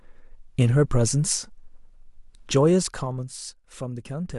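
No technical faults are audible in this speech.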